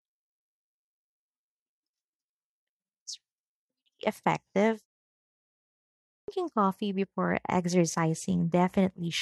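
Right around 5.75 s there's a clipped start after a pause. The output device seems to have dozed off during the roughly one-second gap and took a while to wake back up, so the first 0.53 s of the next stretch of speech never made it out. What you hear is the sound snapping in abruptly out of silence, already partway along, landing on "coffee before" without its opening.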